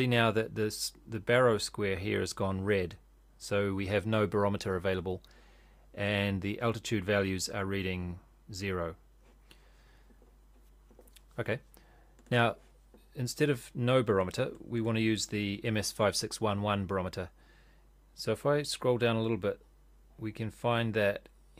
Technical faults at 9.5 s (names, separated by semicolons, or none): none